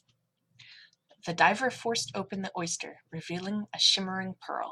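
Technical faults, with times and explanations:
2.07–2.92 s, Bluetooth SBC bit pool drop: the speech turns dull and gritty as the encoder starves its highest sub-bands and coarsely quantises the rest, which fits a bit pool falling from 31 to 13, near 94 kbps, before the rate recovers.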